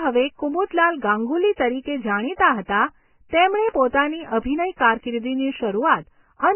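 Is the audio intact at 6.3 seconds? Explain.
No. At 6.3 s the speech sounds hissy and grainy, with roughened tones and smeared onsets, and nothing is left above 3.1 kHz. This heavy damage runs through the whole clip, and its likely cause is Vorbis compression at a very low rate, one that points to roughly 10 kbps. At that rate the encoder drops the cut-off and quantises the remaining treble so coarsely that fine detail turns into noise of similar energy.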